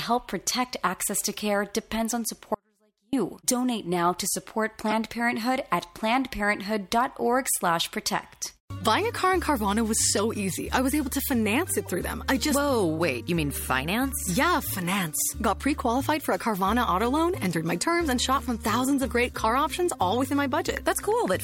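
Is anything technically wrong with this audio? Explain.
Yes, there are two kinds of fault.

From 2.55 to 3.13 s there is an audio dropout to a faint residue. The wanted signal was likely lost somewhere upstream while the rest of the path stayed live. For about 0.58 s the sound cuts off abruptly, and only a faint trace remains, about 40 dB below the normal level. The sudden edges on both sides make it sound like a break rather than a pause or a fade.

Corrupt frames were decoded at 4.89 to 4.92 s, 10.13 to 10.19 s, and 11.85 s. At each point, damaged bits in a compressed frame reached a decoder that played the frame anyway. Misread gains and codes placed energy at the wrong frequencies. This happens across roughly one frame at the first and last points and about two at 10.13 s. Each event is heard as a short chirp or burst of noise, and the middle one lasts slightly longer.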